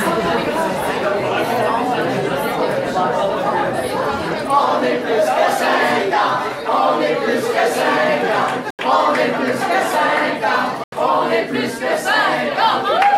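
Two short holes, at 8.70 s and 10.84 s, each about 85 ms long. They are blocks of digital silence: the output buffer likely went unfilled and the sound dropped abruptly to silence, which fits a 4096-sample buffer.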